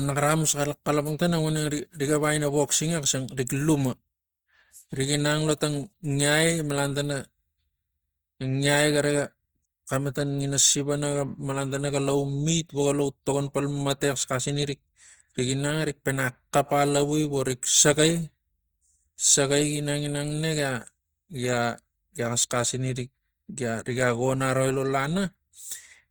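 The speech was most likely squeezed through Opus compression in its music (CELT) mode, at a rate the sound suggests is around 24 kbps, from start to finish. With too few bits for every band, the encoder keeps each band's overall energy but fills the detail with folded copies of lower bands or with noise. The damage is plainly audible: voiced tones come out rough, grainy and noisy, while the full bandwidth survives, reaching up to 20.4 kHz.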